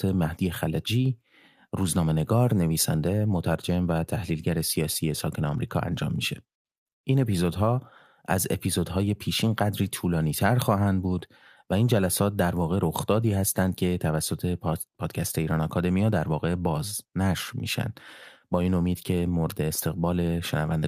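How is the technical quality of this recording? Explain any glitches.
No glitches or technical faults can be heard here.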